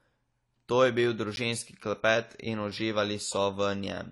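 Speech, and the whole clip has that dull, smeared, fizzy quality of plainly audible lossy coding. There's nothing above about 11.4 kHz, with the sibilants warbling, so this is likely AAC compression at a low bitrate, the sort of damage you'd expect around 32 kbps. Then at 1.36 s there's a block of digital silence, roughly 10.7 ms where the signal drops straight to silence and back with no fade. It comes across as a tick or dip, and the length fits a 512-sample buffer that wasn't filled in time.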